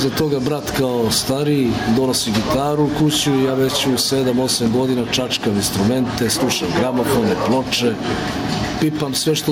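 Gain pumping runs through the whole clip. The gain swings by around 10 dB. Loud and soft parts sit squashed together. The likely cause is input gain set far too high, with a fast limiter clamping down.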